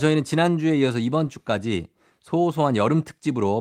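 The speech recording shows no technical faults anywhere in the signal.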